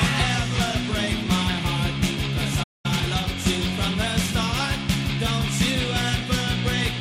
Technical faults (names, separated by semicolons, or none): playback stall; time-compressed catch-up